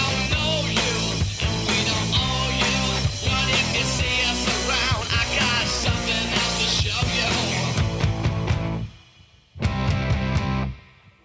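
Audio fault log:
No faults are present in the audio. It has passed through call microphone processing, which leaves nothing above 8 kHz and trims away the lowest bass.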